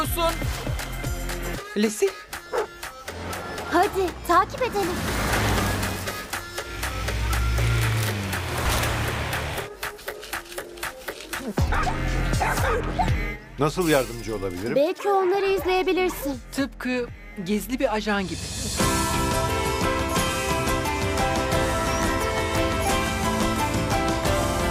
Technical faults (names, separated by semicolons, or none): none